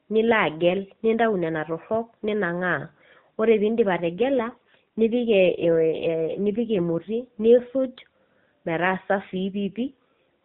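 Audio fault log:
4.14–7.76 s and 9.30–10.23 s, AMR rate drop: the speech turns rougher and more buzzy in the same narrow phone band with no gaps. That fits the link forcing AMR from its 12.2 kbps mode to 5.9 kbps, trading detail for error protection, then recovering.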